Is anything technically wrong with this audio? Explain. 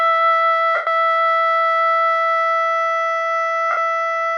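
Yes. The music has lost LE Audio frames at 0.75 to 0.87 s and 3.71 to 3.77 s. The decoder fills each gap by repeating the last spectrum with random signs, so the tones smear into noise and fade. The 0.12 s gap and the 0.06 s gap both fit 7.5 ms LC3 frames.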